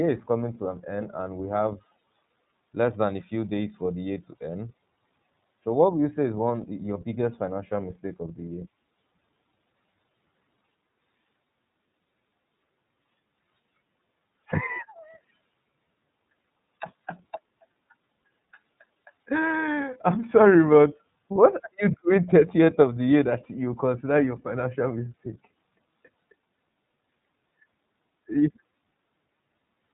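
Throughout, the speech has been coded by the iLBC codec, which builds each frame's excitation without reference to the previous one. The texture fits its 30 ms frame mode at 13.33 kbps. Nothing above 3.8 kHz survives, and the speech sounds plainly rough and synthetic.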